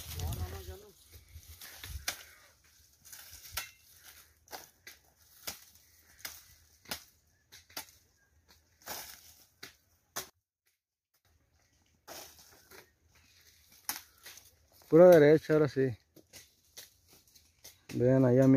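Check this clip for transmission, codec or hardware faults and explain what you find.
One fault, a brief one-channel-inverted event, runs from 10.30 to 11.25 s. One stereo channel's polarity flips, likely in the hardware path, so content shared by both channels cancels when summed to mono. Centred material and bass collapse, dropping the level by about 26 dB and leaving only a faint residue of what differs between the channels.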